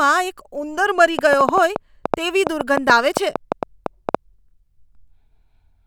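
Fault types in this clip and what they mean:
Train of clicks: from 1.19 s to 4.16 s, starting just after "ઉંદર મરી", a run of about twenty similar sharp clicks sits on top of the speech, roughly 6 per second but unevenly spaced, and the pauses don't hide them. Their peaks stand about 15 dB above the speech, so they read as loud ticking. Pulses this alike and repetitive likely come from electrical interference or a faulty connection or power supply.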